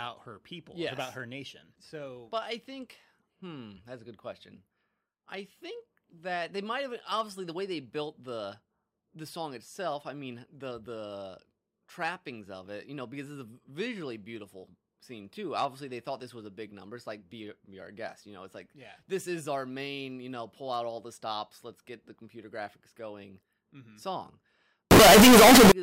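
From 24.91 to 25.72 s the speech turns into a loud, harsh, square-edged blast in which background noise is as strong as the voice, though the pitch remains traceable. This is likely float read as integer: 32-bit float samples interpreted as 32-bit integers. The waveform shows near-square blocks at an almost fixed, high level, and the spectrogram fills with dense broadband energy.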